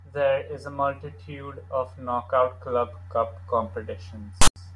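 A speech clip, and right near the end, from 4.42 to 4.56 s, file tags get played as audio: text metadata read as samples gives a harsh, lopsided rasp, then padding drops to silence.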